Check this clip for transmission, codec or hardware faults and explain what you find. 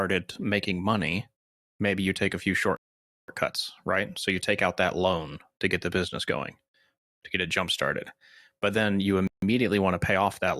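Two rebuffering stalls interrupt the speech. The player exhausted its downloaded audio and halted until more arrived, at 2.77 to 3.28 s, adding 0.52 s, and at 9.27 to 9.43 s, adding 0.15 s. Each time the speech drops to silence, then resumes exactly where it stopped, with nothing missing.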